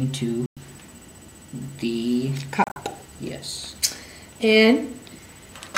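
Bluetooth dropouts at 0.46 s and 2.64 s: the sound cuts out, then resumes further along. The first is a single gap of about 110 ms. The second is broken gaps scattered over about 120 ms. This is likely from wireless packets arriving too late to play.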